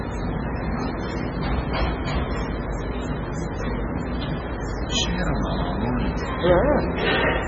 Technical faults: MP3 compression

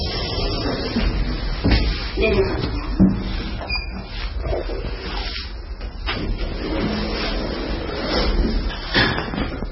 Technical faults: MP3 compression

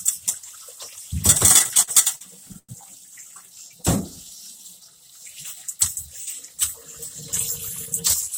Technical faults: repeated stalls (stutter); jitter buffer slow-down

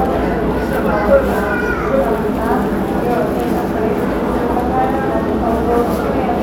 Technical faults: none

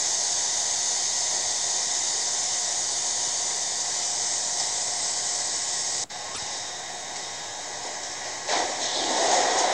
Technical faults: broken MP3 bit reservoir

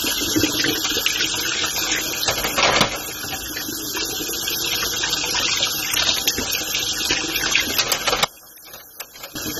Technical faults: AAC compression; one channel inverted

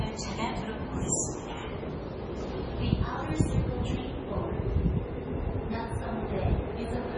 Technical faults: MP3 compression

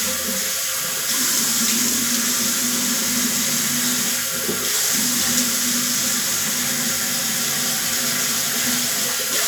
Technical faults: none

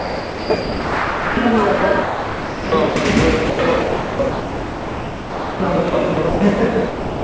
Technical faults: sound chopped by the voice detector; sound dropped by the voice detector

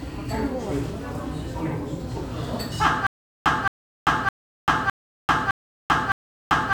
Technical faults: stutter with silent gaps

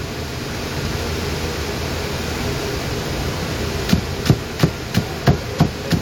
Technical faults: none

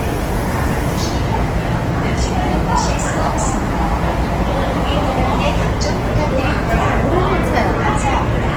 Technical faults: Opus compression

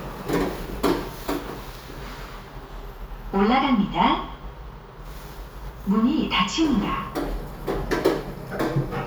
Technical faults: none

